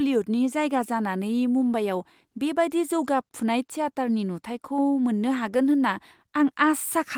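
No technical fault can be heard anywhere in the speech recording, and the signal stays steady and continuous throughout.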